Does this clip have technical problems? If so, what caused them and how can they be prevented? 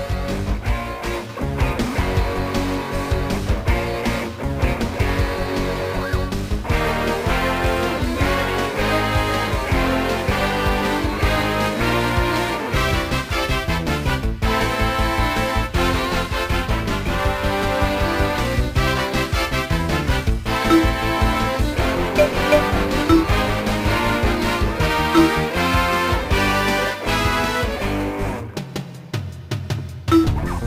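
Yes. Sample clock jitter runs throughout the clip. The converter's clock wanders by around 10 microseconds, so each sample is taken at a slightly wrong moment. Where the waveform changes fastest, this becomes an error roughly 25 dB below the sound, heard as a hiss or grit that swells on loud, bright passages and vanishes in quiet gaps. On a spectrogram, a broadband noise haze rises and falls with the high-frequency content, while the waveform itself looks ordinary. Prevention: clock the converter from a stable, low-jitter source.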